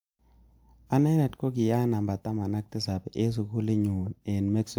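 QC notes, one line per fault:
Nothing stood out on listening to this speech recording.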